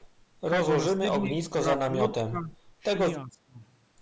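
At 0 to 0.06 s a very faint delayed copy of the speech appears, trailing by 375 ms. This is an echo leak, likely from a far-end loudspeaker whose echo canceller let some residual pickup through and sent it back.

Between 0.93 and 1.25 s, 1.43 and 2.55 s, and 3.25 and 3.6 s, the speech repeatedly dips by about 15 to 20 dB in short pieces, together about 1.2 s. This is speech suppressed in double talk, likely because the echo canceller mistook overlapping talk for echo and turned it down.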